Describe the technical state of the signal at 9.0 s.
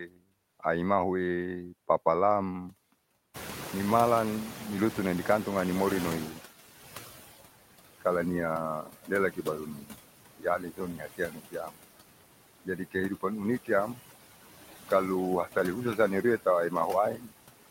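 At 9.0 s you're in the middle of speech cut by the noise suppressor, running from 8.82 to 9.98 s. The suppressor mistook part of the speech for background and pulled it down with the noise, by up to about 16 dB. About half a second of that stretch ends up swallowed or faint.

Under that, noise suppressor artifacts run through the whole clip. The steady room noise, which jumps up around 3.5 s, gets cut by about 16 dB between phrases and comes back under the speech.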